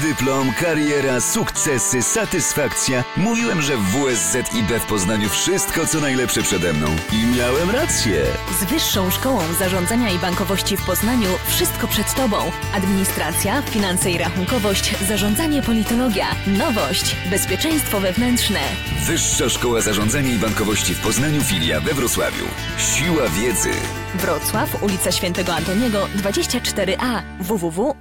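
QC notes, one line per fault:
Nothing jumped out on this one, so there's no fault to log.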